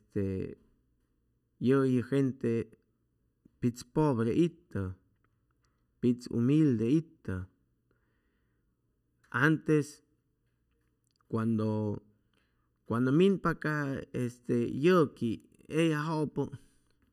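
Channel delay (comb filtering) runs throughout: one channel lags by under a millisecond, so the mono sum notches near 700 Hz and upward, leaving the speech hollow.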